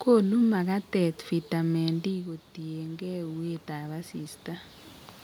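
At 1.86 s the talker drops back from the mic, and the level falls by about 10 dB. The automatic gain rising kicks in from there: the AGC reads the quieter input and slowly winds its gain up by about 5 dB through 4.43 s. You hear the voice and the room noise swell together over those couple of seconds. The gain only makes back half the loss, and around 4.5 s the talker moves again.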